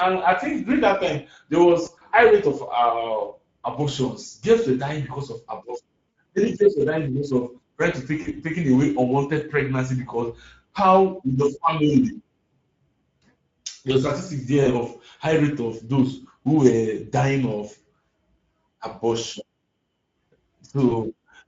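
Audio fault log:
Throughout: Speex codec. The speech sounds hoarse and grainy, with a noisy fill up top. The bit budget is too thin for the excitation, which points to a middling setting of around 17 kbps.
1.85–2.03 s, 6.09–6.15 s, 8.21–8.33 s, 14.63–14.69 s, 20.89–20.96 s: VoIP packet loss concealed by the speech codec. There are short buzzy or noisy, fading smears where the decoder stretched its last pitch and filter over missing audio. The gaps are 60 ms (in short bits over 160 ms), 60, 40, 20 and 20 ms, and the voice stays weak briefly after each one.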